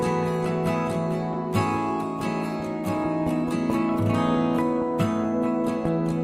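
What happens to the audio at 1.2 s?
Nothing goes wrong at 1.2 s; the audio plays through that point intact, with no dropout, click or other fault.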